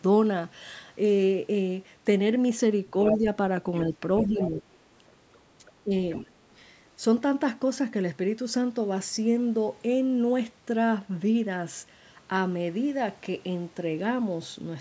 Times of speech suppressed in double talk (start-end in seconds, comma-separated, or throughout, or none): 3.13-3.26, 4.24-4.63, 5.58-5.91